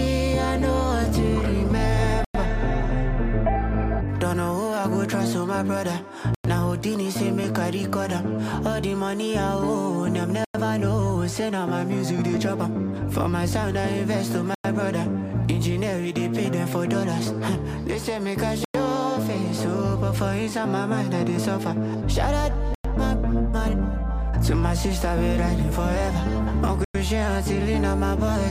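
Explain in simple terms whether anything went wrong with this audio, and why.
Gap between chunks: the sound stops for a tenth of a second at 2.25, 6.35, 10.45, 14.55, 18.65, 22.75 and 26.85 s, after every four seconds of audio. Unlike dropouts, nothing is missing; playback just pauses and resumes.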